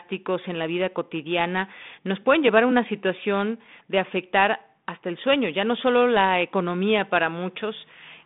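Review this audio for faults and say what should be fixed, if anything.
No faults found; nothing here needs fixing.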